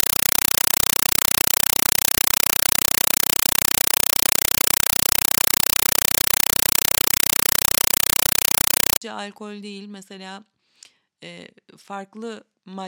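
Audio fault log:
0.0–9.02 s, compressed stream played as audio: chattering static replaces the sound until speech comes back with "alkol değil mesela". Undecoded Dolby Digital data is being played as samples, so you get 5.33 ms noise bursts 31.25 times a second, with padding between them.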